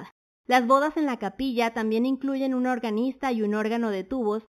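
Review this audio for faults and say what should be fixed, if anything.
Imaging from linear upsampling runs throughout this speech: the band is dulled near 4 kHz, with a faint mirrored image roughly 25 dB down between 4 and 8 kHz, pointing to 8 kHz audio interpolated up to 48 kHz. Prevent it by resampling with a proper band-limited polyphase or windowed-sinc filter.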